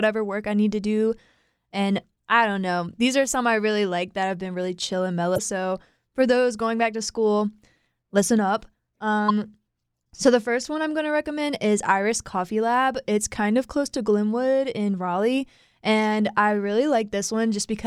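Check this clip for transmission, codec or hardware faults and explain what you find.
There are two short faults, both damaged data in a compressed stream, at 5.35 to 5.39 s and again at 9.26 to 9.31 s. Each lasts roughly 40 ms. In both spots, part of the encoded speech stream is corrupt, so the decoder can't make sense of the frames there and loses sync while it hunts for the next valid frame header. You hear it as a quick glitch breaking into the speech.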